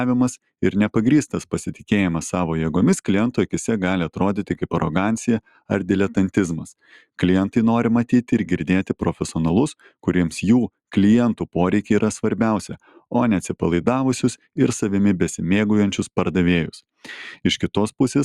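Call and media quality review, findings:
Brief dips in level where steady or decaying sound sinks and its tail is clipped short, at 5.45–5.7 s (deepest about 15 dB), 9.8–10.06 s (about 10 dB) and 12.82–13.01 s (about 10 dB); they affect roughly 200 ms, 150 ms and 200 ms in total. Sound cut by the noise suppressor: it misjudges sustained or fading content as noise and attenuates it harder than the surrounding audio, while sharp onsets pass largely intact.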